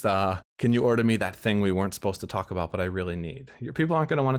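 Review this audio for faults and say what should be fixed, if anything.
Nothing in this audio needs to be fixed, as there are no faults to report.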